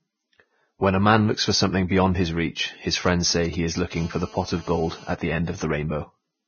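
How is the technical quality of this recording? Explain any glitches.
The recording quality is poor. The speech is heavily degraded throughout, and a phone interferes in two stretches.

Throughout, the sound is hissy and grainy, with nothing above 6.6 kHz. This is likely Vorbis compression at a low bitrate, around 17 kbps. Treble detail is quantised into noise.

From 3.06 to 3.94 s come GSM signalling bursts. A nearby 2G phone sends short groups of radio bursts that the audio circuit rectifies. They are heard as a galloping dit-dit-dit of 217 Hz buzzes, roughly 15 dB below the speech.

From 3.96 to 5.14 s there is GSM phone buzz. The phone is now in a call, transmitting 217 bursts per second. This gives a steady, raspy 217 Hz buzz about 22 dB below the speech.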